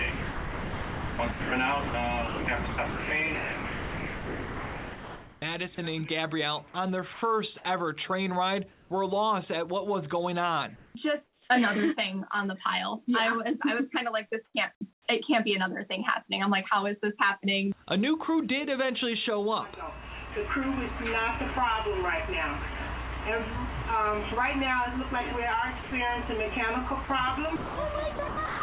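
The audio arrives band-limited to 4 kHz, consistent with a G.711-style call path, and shows sound chopped by the voice detector from 0.11 to 5.78 s and again from 27.05 to 28.61 s. Across the first stretch nearly 4 s of sound flickers away into synthetic fill. In the second about 0.5 s does. This is likely a sender detector toggling transmission on and off. Sound dropped by the voice detector occurs at 7.13 to 7.22 s and 25.82 to 25.91 s. Brief portions of sound give way to steady noise or near silence, likely because quiet material was classed as background and not sent. Comfort noise in place of the background appears at 8.72 to 8.9 s, 10.76 to 11.48 s and 14.45 to 15.08 s. The detailed real background becomes a featureless hiss, about 3 dB quieter in the first instance, where the background sits about 30 dB below the loud parts. The likely cause is discontinuous transmission, with the receiver synthesising fill during pauses.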